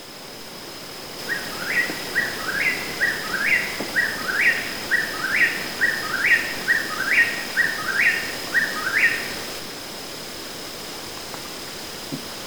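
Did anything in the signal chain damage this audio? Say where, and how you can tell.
No, nothing stood out on listening that points to damage at any stage of the chain.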